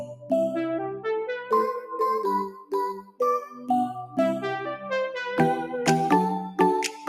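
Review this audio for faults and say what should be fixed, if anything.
A speech-tuned noise suppressor was left running on non-speech audio, so it treats steady and sustained parts as noise. The level pumps and flutters by around 10 dB, with attacks passing while held sounds and their tails sink and thin out.

The same suppressor also misjudged specific passages and pulled them down harder. Level drops at 0.08–0.31 s (about 8 dB), 2.49–2.74 s (about 17 dB), 2.93–3.21 s (about 19 dB), 3.44–3.69 s (about 9 dB), and 6.9–7.09 s (about 6 dB), clipping decays short.

To prevent this, bypass or disable speech noise suppression whenever the input is not speech.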